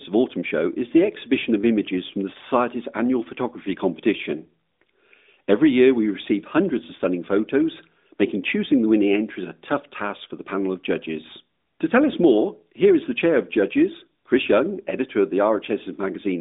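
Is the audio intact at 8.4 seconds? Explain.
Yes, at 8.4 seconds the speech runs on without any dropout, click or other fault, heard through the narrowband band of the AMR-NB mobile codec at 12.2 kbps, which passes nothing above about 3.8 kHz.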